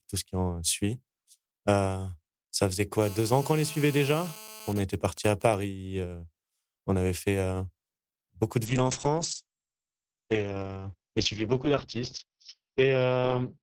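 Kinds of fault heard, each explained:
GSM phone buzz: From 3.02 to 4.73 s a hard, raspy buzz sits under the speech at about 18 dB below it. Its 217 Hz fundamental and dense harmonics have nothing to do with the talker. A nearby 2G handset on a call is transmitting in bursts 217 times a second, and the audio circuitry rectifies those radio pulses into a steady audible tone for as long as the call transmission continues.
GSM signalling bursts: From 4.76 to 5.54 s, immediately after the steady buzz, the interference breaks into even ticks with a longer 217 Hz buzz twice a second, somewhat quieter than before. The phone's user has stopped talking, so the handset sends only short groups of radio bursts instead of continuous ones. The audio circuit still rectifies each group, which produces this clipped, rhythmic pattern in place of a constant drone.
Call bitrate drop: From 8.67 s to the end of the clip the speech turns coarse and watery, and it loses its top end, with the audio bandwidth shrinking from 20 kHz to 6 kHz. 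The call's bandwidth estimate fell and the Opus encoder was given far fewer bits, which fits a drop from around 32 to 8 kbps. It codes more roughly at that rate and discards the high frequencies, and it does not recover before the clip ends.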